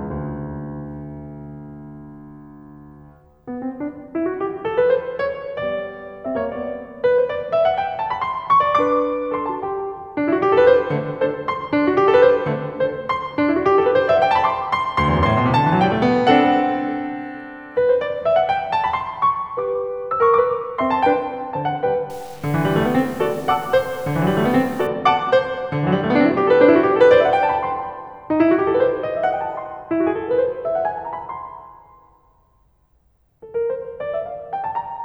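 From 22.10 to 24.87 s the music was likely truncated to about 7 bits without dither, a case of low bit depth without dither. The rounding error tracks the signal, so quiet passages turn gritty, with grainy distortion sitting only around 25 dB below the music.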